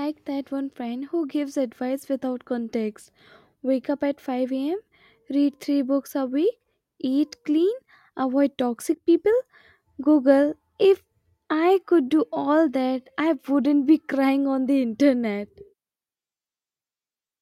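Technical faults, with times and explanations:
8.94 to 9.08 s, one channel drops out. The speech level falls abruptly by about 6 dB for 0.13 s, then recovers. The likely cause is one stereo channel going silent briefly. In the mono sum, shared sound loses half its amplitude.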